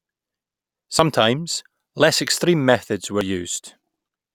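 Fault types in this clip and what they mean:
Dropped buffer (overrun): The speech jumps ahead at 0.99, 1.88 and 3.21 s. Nothing goes silent. A short slice, roughly 10 to 30 ms, is missing. The likely cause is samples overwritten before the program read them.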